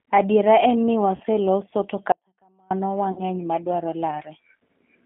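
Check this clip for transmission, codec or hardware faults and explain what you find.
Three kinds of fault are present: a low-rate speech codec throughout, two concealed packet losses, and one dropout to a faint residue.

G.729 codec, throughout the speech clip: the sound is rebuilt from a vocal-tract filter, a pitch predictor and a few pulses per short frame, consistent with G.729A at 8 kbit/s. The line band runs roughly 200 Hz to 3.4 kHz, so the top is missing and the low end is thin. The codec damage is plainly audible as a rough, slightly synthetic texture.

VoIP packet loss concealed by the speech codec, at 1.16 to 1.22 s just after "en ni", and at 3.12 to 3.23 s: each time about 40 ms of audio went missing, consistent with four consecutive 10 ms frames. The decoder filled the gap by extending its last pitch and filter settings at falling gain. This produces a brief buzzy or noisy stretch that sags in level. 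At 3.12 s the weakened, distorted sound lingers past the loss itself while the decoder's frame-to-frame state recovers.

Audio dropout to a faint residue, from 2.12 to 2.71 s: for about 0.59 s the sound cuts out abruptly, with no fade. Only a faint trace, roughly 35 dB below the normal level, remains in the gap. The sound then returns just as suddenly. The downstream path stayed live while the wanted signal was interrupted, likely by a break upstream in the feed.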